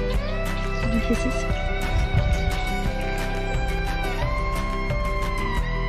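No technical faults are audible.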